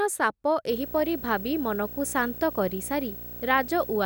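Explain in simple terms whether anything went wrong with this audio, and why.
A screen or video cable is leaking electrical noise into the audio path, a fault called video or display buzz. From 0.69 s to the end, a fairly loud 59.94 Hz buzz with hiss above it sits under the speech, plus a thin, very high 15.7 kHz whine.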